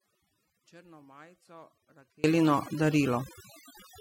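A speech recording with two faults. From the very start until 2.24 s the signal sits in an audio dropout to a faint residue, with only a faint trace of the sound roughly 30 dB below its normal level before full level returns abruptly. This is likely a lost feed whose downstream path stayed live. On a waveform it shows as a thin sliver that jumps to full height at 2.24 s. Overdone noise removal runs throughout: the background is pushed to near silence dotted with twinkling specks, because bands near the estimated noise floor were cut deeply along with quieter parts of the voice. A spectrogram would show isolated flickering dots in a dark background and gappy, patchy speech harmonics.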